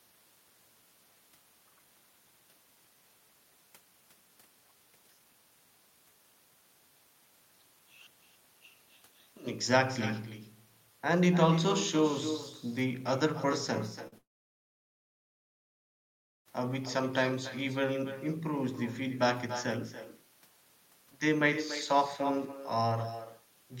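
Throughout the speech, an echo with no canceller trails every phrase by roughly a third of a second, about 11 dB below the direct sound. The far end's loudspeaker output is reaching its microphone and returning across the network unremoved, giving a thinner duplicate under the talker.

At 14.07 to 14.14 s, a short concealed packet loss leaves a brief smear. About 40 ms of audio failed to arrive in time, and the decoder bridged the gap by extending the preceding sound before blending back in.

From 14.18 s to 16.47 s, the audio briefly carries on as a fading continuation of the last sound, then falls to silence for roughly 2.2 s before resuming with that stretch missing. This is likely a long network dropout, where nothing arrived for over two seconds and concealment ran out.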